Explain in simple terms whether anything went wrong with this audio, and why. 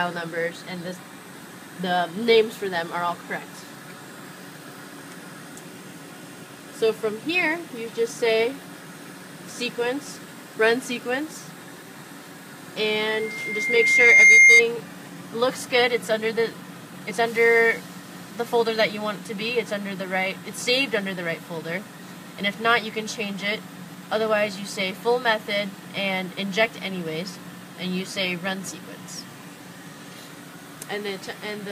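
Something did go wrong, for about a second and a half. From 13.10 to 14.63 s there is loudspeaker feedback squeal. A microphone picked up the loudspeaker it was feeding, so the sound kept looping round. At one pitch, near 2.1 kHz, each trip round made it louder. The tone swells over roughly a second into a piercing squeal. It ends up far louder than the rest of the sound.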